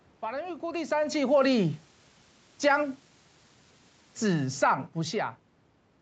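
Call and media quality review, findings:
Low bit depth with dither, 0.94 to 4.45 s: steady, even hiss with no distortion, sitting about 30 dB below the speech. Dither randomises the rounding error into flat white noise. The noise level fits an 8-bit quantisation stage after capture.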